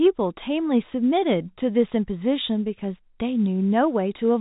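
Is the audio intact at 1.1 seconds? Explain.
Yes, at 1.1 seconds the speech is intact, carried cleanly through G.711 telephone coding with nothing above about 3.8 kHz and no fault to be heard.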